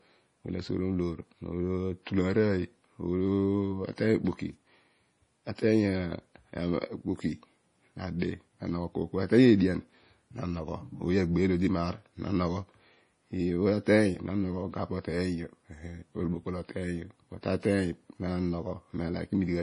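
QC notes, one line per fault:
Throughout, low-bitrate audio saved at a high bitrate: the spectrogram stops flat at 10.5 kHz and the speech sounds dull and smeared, likely a low-bitrate MP3 re-encoded larger.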